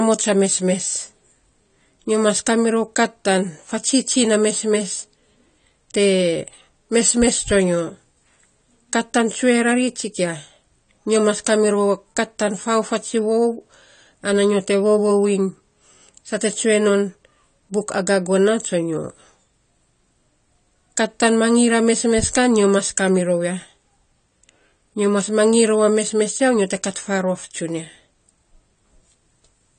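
From start to finish the speech carries AAC compression damage, plainly audible throughout. Nothing sounds above about 9 kHz, so the top end is missing and the sound is dull. Sibilants come out fizzy and smeared. Sustained sounds warble. The likely cause is a low-bitrate AAC-LC encode, around 32 kbps. At that rate the encoder drops high frequencies and coarsely quantises what remains, leaving gaps and noisy texture in the spectrum.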